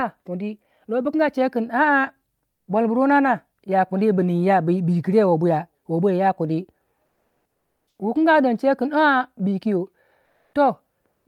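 In the pauses at 2.49–2.67 s, 7.05–7.99 s, 10.25–10.53 s and 11.13–11.25 s, the background turns flat and featureless, dropping about 9, 10, 0 and 4 dB. This is comfort noise in place of the background, likely from discontinuous transmission such as Opus DTX.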